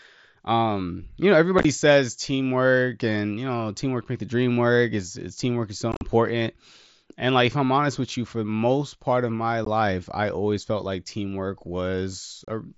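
Unconcealed Bluetooth headset packet loss breaks the speech at 1.59–1.65, 5.92–6.01, 9.65 and 12.45–12.48 s. Voice packets between headset and phone went missing and silence filled them, leaving abrupt holes that are chopped and scattered in the longer two. These show as flat waveform gaps and blank vertical spectrogram stripes.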